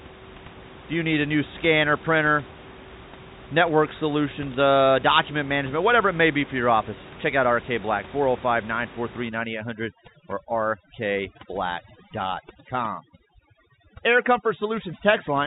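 From 9.29 s to the end, the background collapses into near silence dotted with twinkling specks. This is overdone noise removal: a noise reducer set far too strong has attacked the room noise, which until then sits about 19 dB under the speech, by pulling individual frequency bands down or out whenever they come close to its noise estimate. The quieter parts of the speech are cut away along with it, all within the narrow telephone band.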